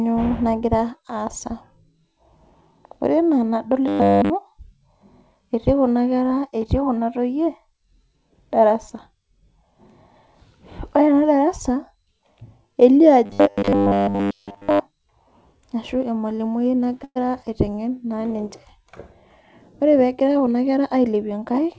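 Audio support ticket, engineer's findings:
Robotic sound from repeated short buffers, 3.88 to 4.30 s and 13.26 to 14.80 s: rigid 100 Hz metallic buzz, entirely in the first stretch and over most of the second. Likely cause is 10 ms buffers replayed while fresh audio is skipped. Spectrogram shows flat harmonic combs at 100 Hz spacing; the waveform shows identical 10 ms cycles.

Call audio freeze, 17.04 to 17.18 s: the last sound is held as a fading buzz for 116 ms, about 40 ms of it silent, then playback resumes with nothing lost. Likely cause is late packets draining the jitter buffer. Spectrogram shows a smeared, decaying band followed by a short blank gap.

Jitter buffer speed-up, 19.82 to 21.14 s: audio is hurried, running at 108% speed with unchanged pitch, and about a tenth of a second is trimmed in small pitch-period cuts. The waveform looks slightly compressed in time, with small discontinuities at the splice points. 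The G.722 call path keeps everything below 8 kHz, and the spectrogram is empty above it.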